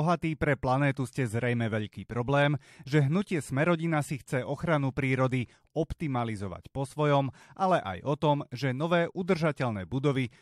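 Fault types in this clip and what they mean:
No technical fault can be heard anywhere in this speech recording. There is nothing to list for it.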